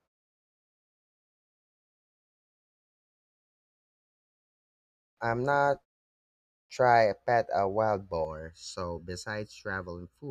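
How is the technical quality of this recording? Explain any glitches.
The recording has two glitches: speech onsets are cut off after pauses, and the final stretch is coloured by comb filtering.

Clipped start after a pause: The output device drops into a low-power state during silence and is slow to wake. After the 4.6 s of silence at the opening, about 0.53 s is lost from 4.64 to 5.17 s, so "I'm not" starts abruptly. After a 0.38 s gap, another 0.55 s vanishes from 6.15 to 6.70 s before "a pet a wild".

Channel delay (comb filtering): From 8.25 s to the end, one channel arrives late by a fraction of a millisecond, roughly 0.7 ms. When the channels are summed, the shared signal cancels at evenly spaced frequencies, beginning near 700 Hz. The voice after "a pet a wild" sounds hollow and phasey.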